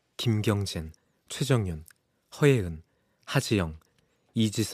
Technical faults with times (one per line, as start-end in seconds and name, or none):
none